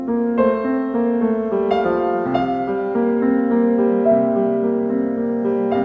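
No technical faults turn up in the music, which has the steady band-limited character of a wideband call codec such as G.722, with nothing above 8 kHz.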